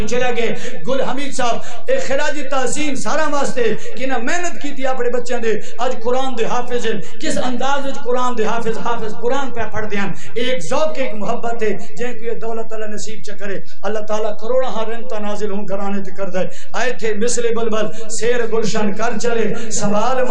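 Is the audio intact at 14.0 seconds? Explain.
No. At 14.0 seconds, as throughout the clip, there is no audible change, but a DC offset holds the whole waveform off zero by a constant of about -9 dBFS. That eats headroom and leaves steady energy at 0 Hz.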